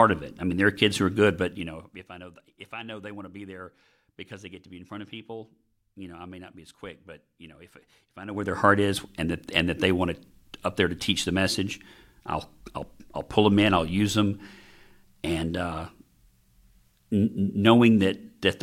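From 8.21 to 8.56 s, between "know if if I" and "heart is and that", the gain is moved in unsmoothed steps of about 2 dB, around forty a second, rather than as a continuous ramp. Over roughly a third of a second the level shifts by around 20 dB. Each jump puts a small discontinuity into the waveform, so the speech carries a rapid ticking buzz while the level travels. This is classic zipper noise.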